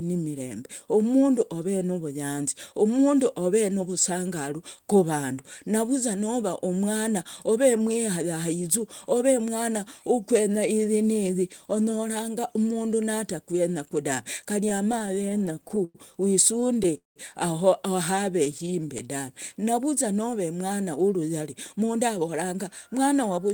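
From 14.69 to 15.97 s, late packets kept draining the jitter buffer, causing repeated stalls (stutter): sixteen short gaps, the longest 101 ms, were filled by stretching the last sound, about 250 ms in all. The speech drags and catches. A second burst at 16.61 to 17.18 s has five gaps filling 220 ms, one lasting 184 ms and faded.

Between 18.30 and 19.66 s the buffer ran low or had just raised its target delay, so the receiver repeated pitch periods to rebuild its reserve. This jitter buffer slow-down adds 85 ms and plays the speech at 94% speed with unchanged pitch. Seven tiny stalls, none over 10 ms, overlap it at 18.45 to 19.01 s.

From 21.40 s to 23.53 s the buffer held excess audio, and the receiver trimmed pitch periods to cut the delay. This jitter buffer speed-up removes about 150 ms, running the speech at 107% speed, hurried but at the same pitch.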